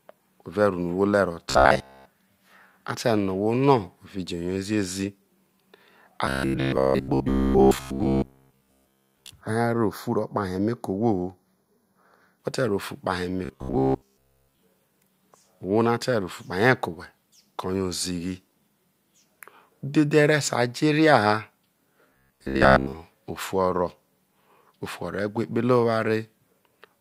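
This is a speech clip with robotic sound from repeated short buffers at 1.50–2.07 s, 6.26–9.30 s, 13.45–14.59 s and 22.10–22.93 s, just before "ofu o̱ro̱". The voice becomes a rigid metallic buzz at 66.7 Hz. The likely cause is a 15 ms stretch of audio replayed over and over. That replaces most of the real sound, and all of it in the third event. Channel delay (comb filtering) is heard from 9.41 to 12.40 s, ending just before "whe̱te̱ rro ofu". One channel lags by a fraction of a millisecond. Summed to mono, this cuts a notch near 3 kHz, and the sound turns hollow.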